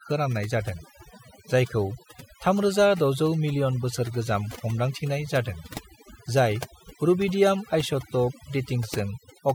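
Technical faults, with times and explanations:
Throughout: overdone noise removal. Noise reduction set too hard pushes individual frequency bands down or out whenever they sit near its noise estimate, taking quiet parts of the speech with them, so the background drops and breaks up into twinkling specks.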